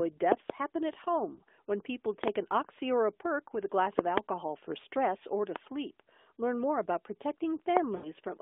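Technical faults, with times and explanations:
0.32–0.52, 2.24–2.30, 3.99–4.20, 5.56–5.58 and 7.77–7.79 s, loud pop: a sudden voltage step or pulse, likely from a switch, plug contact or static discharge, lands on the line and is shaped by the following circuits. Each event is a sharp pop or thump, a double pop in the first three and a single one in the last two, roughly 20 to 25 dB above the speech, which continues underneath.
1.34–1.41 s, lost AMR speech frames: corrupted radio frames failed their checks, so the decoder repeated its last good pitch and vocal tract settings at falling gain for about 40 ms, which fits two lost frames. The speech dips and warbles briefly, then returns rough for a moment through the narrowband mobile channel.
7.96–8.11 s, lost AMR speech frames: a longer run, about 80 ms and consistent with four frames, forced the decoder to keep extrapolating from stale parameters with steadily decreasing gain. 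The sound is smeared and drawn out, fades toward silence, and comes back weak.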